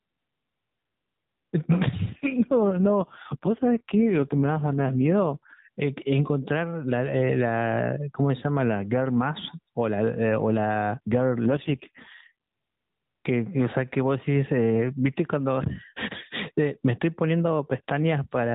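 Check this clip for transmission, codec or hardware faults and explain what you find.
Two kinds of fault are present in the speech, riding on a mobile AMR narrowband path whose cut-off at 4 kHz and light coding roughness are audible throughout.

Gain pumping runs through the whole clip, swinging the level by around 10 dB. The likely cause is input gain set far too high, with a fast limiter clamping down on every loud moment. Dynamics are squashed.

AMR rate drop occurs from 2.10 to 5.67 s and again from 11.46 to 12.33 s. A weak radio link forces the codec to spend bits on error protection, consistent with a fall from 12.2 to 4.75 kbps. Bandwidth stays unchanged with no dropout, but the speech turns buzzier and more synthetic until the rate recovers.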